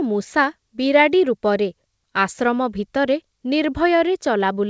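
No technical faults can be heard anywhere in the speech. It has passed through a WebRTC call path that works as intended, and the band stops at 8 kHz with nothing above it, which fits a wideband call codec such as G.722.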